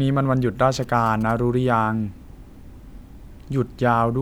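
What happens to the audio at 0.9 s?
At 0.9 s you're in the middle of GSM signalling bursts, running from 0.74 to 1.32 s. A nearby 2G phone is doing its signalling chatter, and the audio circuit rectifies it into a galloping dit-dit-dit of short buzzes at about 217 Hz, sitting well below the speech.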